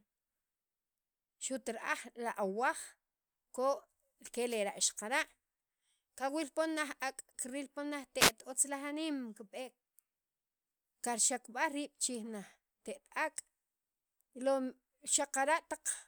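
The analogue FM radio link from the microphone faded as reflected signals cancelled, letting receiver noise surge through. These wireless microphone noise hits sound as brief bursts of static swishing over the speech, from 4.47 to 4.59 s and from 8.19 to 8.32 s, just before "otzlaj aniim kib'eek".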